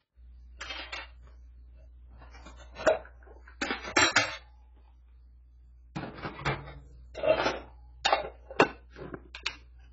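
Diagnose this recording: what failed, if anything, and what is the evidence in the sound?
Codec stage: the whole clip sounds dull and heavily smeared, with nothing above 7.6 kHz, likely AAC compression squeezed to a very low bitrate.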